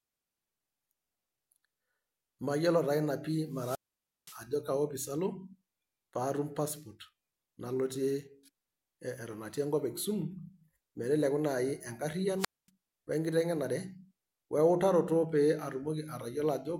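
At 3.50 s and again at 12.37 s the speech suffers a wireless microphone squelch dropout: the analogue FM radio link fades, and the receiver's squelch mutes the output. Each event brings a short rise of hiss, then a hole of near silence, about 0.52 s in the first (to 4.44 s) and 0.24 s in the second (to 12.69 s). A waveform shows a flat gap; a spectrogram shows broadband noise just before a blank band.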